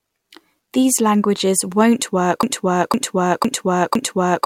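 At 2.43 s, right after "languages won't", a broken-record loop takes over: the same 0.51 s fragment repeats exactly, four times back to back, until the end. The likely cause is a stalled player or stream resending its last buffer. Unlike echo, the copies never fade.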